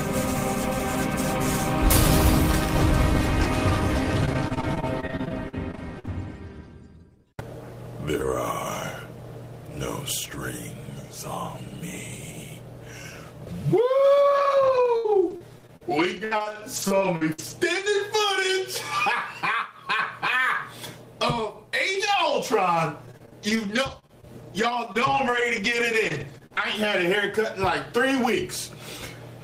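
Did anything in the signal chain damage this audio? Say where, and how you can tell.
Yes: choppy, robotic stretches at 4.25–6.09 s, 14.37–17.88 s and 23.06–26.63 s show repeated packet loss in the network, with each gap patched by extending the preceding sound.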